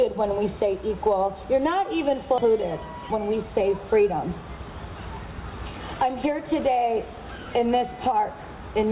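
A stretch of audio was dropped at about 2.38 s, producing a skip ahead: roughly 0.4 s was discarded, and playback jumped straight to the later material with no fill and no gap. The sound on either side of the jump is spliced almost directly, so a chunk of the audio simply vanishes and the join is abrupt. The buffer's delay shrank by about the same amount at that moment.

From 2.94 to 3.44 s the jitter buffer was holding more audio than its target and ran a speed-up to drain it, cutting out short pieces one or a few pitch periods long, over and over, about 50 ms in total. Across that half second the audio plays roughly 10% fast without any change in pitch, giving a brief rushed, compressed quality. Throughout, the sound carries the narrowband coding of a G.711 A-law call path, with nothing above 4 kHz.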